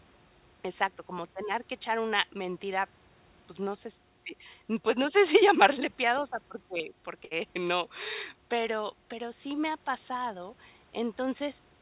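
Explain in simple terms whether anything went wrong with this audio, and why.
Just after "si llamarle piadosa porque", at 7.25 s, the speech briefly turns into a short held buzz or fading hiss for about 60 ms. When it picks up again at 7.34 s, about 60 ms of speech has been skipped. This is a burst of packet loss. A few pieces of the call arrived too late or not at all, so the receiver stretched the last sound to fill the gap and then jumped ahead. The call line's usual cutoff above 4 kHz is also audible as a muffled tone.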